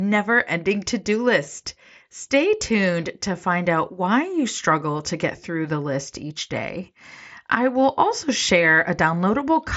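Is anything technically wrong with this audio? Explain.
No, nothing is technically wrong: this speech has passed through a Bluetooth mSBC headset link working as designed, which is why its content stops at about 7.7 kHz with the light graininess on louder sounds that a roughly 60 kbps wideband headset codec leaves behind.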